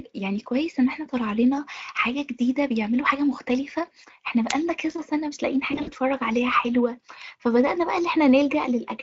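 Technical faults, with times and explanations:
4.48 to 4.54 s, wireless microphone squelch dropout: a brief swell of hiss, an almost instantaneous mute, then the sound comes back. The FM radio link faded far enough for the receiver's squelch to gate the output shut.
5.71 to 5.92 s, VoIP packet loss concealed by the speech codec: the sound is stretched into a fading buzzy tone or coloured noise, then weak or distorted. About 100 ms of packets were lost across 160 ms, with the longest gap 60 ms, which fits roughly five 20 ms frames. The speech decoder filled these gaps by extending its last pitch and filter at falling gain, and it needs time to recover once packets return.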